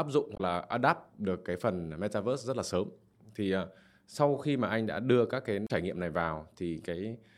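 At 0.33 to 0.40 s and again at 5.64 to 5.71 s, the speech is broken by damaged data in a compressed stream. Corrupted bytes feed the decoder nonsense, so it misreads those frames and hunts for the next valid header, leaving a short chirp, squawk, click or hole about 70 ms long.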